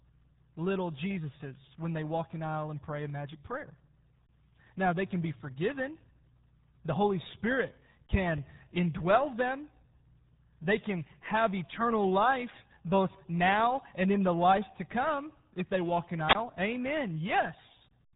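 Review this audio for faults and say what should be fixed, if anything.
The speech sounds muffled and gargly from start to finish, with nothing above about 3.8 kHz and a heavy, watery smearing on every syllable. That is the damage of the RealAudio 14.4 codec, the RealAudio 1 speech coder built for dial-up modems: it squeezes the voice into a bitrate so low, consistent with 8 kbit/s, that it discards the upper band and crudely models what remains. Prevent it by going back to a source that never passed through this codec, or re-encoding from the original at a modern bitrate.

Right after "if they walk in", from 16.28 to 16.35 s, there is a brief surge of hiss, then a hole of near silence lasting about 21 ms before the voice comes back. This is a wireless microphone squelch dropout: the FM radio link from the microphone faded far enough that the receiver's squelch judged the signal lost and muted its output until the carrier recovered. 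Prevent it by keeping a clear line of sight between transmitter and receiver, shortening the distance, and using diversity receivers with well-placed antennas.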